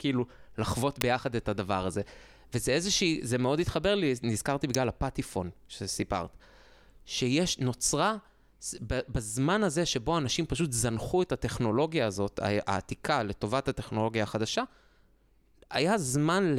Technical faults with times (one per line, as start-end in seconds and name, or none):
1.01 electrical switching spike
4.74 electrical switching spike